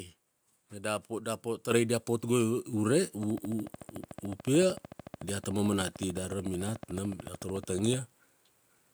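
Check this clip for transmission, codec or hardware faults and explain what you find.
Two faults turn up here, both on the capture side.

At 1.71 s there's a microphone volume step-up: the call software decided the mic was too quiet and bumped the input gain by about 6 dB in one go, so the speech and the background noise jump louder together, instantly.

From 3.23 to 7.95 s a train of clicks runs under everything: a regular tick at 13.6 per second, around seventy in all, roughly as loud as the speech and audible in the pauses too. That's likely interference from nearby gear or a faulty connection or power supply.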